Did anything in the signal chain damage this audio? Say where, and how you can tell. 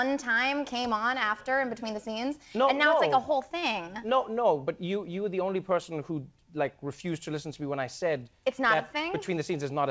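Yes, at the network and jitter-buffer stage. A short stall from a late packet occurs at 3.60 to 3.64 s, where the sound hangs about 23 ms too long with a faint buzz or dip. The buffer ran dry and the receiver stretched the last audio until the packet arrived, so nothing is lost but everything afterwards plays 23 ms later.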